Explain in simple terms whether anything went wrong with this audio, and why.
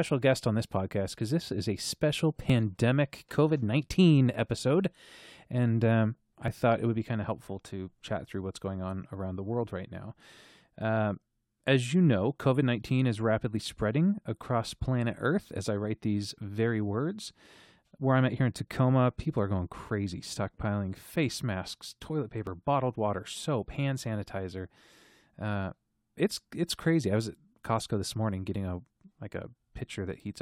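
Four tiny clicks or skips land at 2.50, 6.48, 10.49 and 22.47 seconds, the first after "this is a special" and the second after "um I". This is overlap between stream segments: the audio arrives in 4-second pieces, neighbouring pieces disagree slightly on timing, and a few milliseconds of real sound get trimmed away at the joins.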